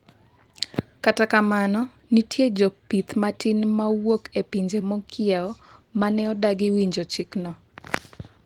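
From 5.38 s the speech turns rougher and muffled, with a watery, smeared texture and less crispness at the top end, lasting until 7.73 s. This is a call bitrate drop. The connection's bandwidth estimate fell, so the encoder had far fewer bits and coded the speech more coarsely, trimming high frequencies. The degradation sounds consistent with a fall from about 32 kbps to around 18 kbps, holding at its lowest for about 2.3 s before the quality recovers.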